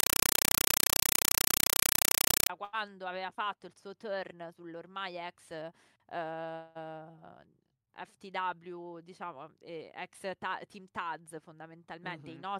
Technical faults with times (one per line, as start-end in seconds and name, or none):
0.00-2.50 compressed stream played as audio